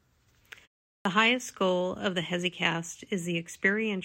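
At 1.01 s, speech resumes after a 0.42 s pause with a clipped start: the output path appears to have gone idle during the silence and needed time to wake or relock before passing audio again. About 43 ms, up to 1.05 s, is lost, so the first sounds of the resuming speech are cut away and it starts abruptly from silence, with no natural onset.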